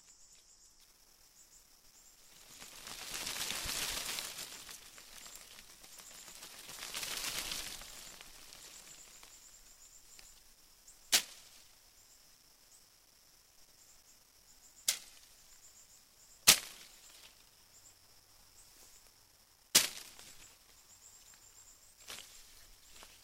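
From 0.81 s to the end, the sound turns grainy. This is low bit depth without dither. The likely cause is rounding to very few levels with no added noise, which fits about 10 bits. The rounding error tracks the signal instead of staying steady. So the grit rises and falls with the sound itself. Quiet passages suffer most. They turn rough, or sputter between two steps. The distortion sits roughly 25 dB below the signal.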